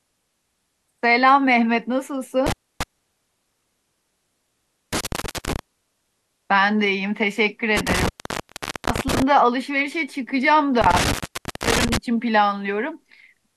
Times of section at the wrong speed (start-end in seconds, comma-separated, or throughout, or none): none